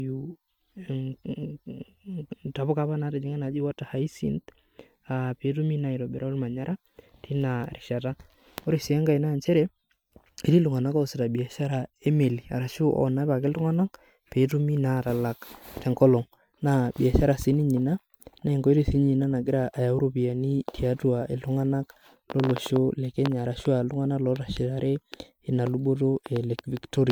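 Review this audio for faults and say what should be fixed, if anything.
Generation loss runs throughout the speech, from start to finish. The audio sounds swirly, hollow and smeared, and consonant attacks are blurred, more than a single MP3 pass at this quality would cause. The likely cause is about seven rounds of decoding and re-encoding. Each round quantises again on a shifted frame grid, so noise and spectral holes build up below a band edge at 20.1 kHz, which fits a 128 kbit/s MP3 chain. To prevent it, edit from an uncompressed or lossless master and encode to MP3 only once, at the final export.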